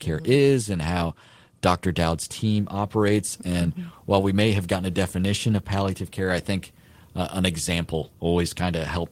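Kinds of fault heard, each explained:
No technical fault can be heard in the recording; the speech signal stays continuous and stable throughout.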